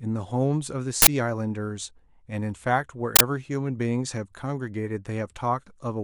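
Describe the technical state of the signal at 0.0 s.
At 0.0 s the signal is intact, with no technical fault audible at that point.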